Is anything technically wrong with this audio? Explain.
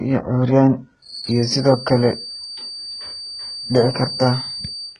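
Yes. Throughout, the speech was likely squeezed through HE-AAC compression at a very low bitrate, around 12 kbps. The encoder kept only the lower spectrum and rebuilt the treble by copying bands upward, so the damage is heavy: s sounds turn gritty and metallic, with nothing above 11 kHz.

From 1.0 s to the end, a feedback whistle sits behind the speech. The loudspeaker-to-microphone loop is likely hovering at the edge of feedback, so a single 4.6 kHz tone keeps ringing, roughly 15 dB below the speech, swelling and fading slowly.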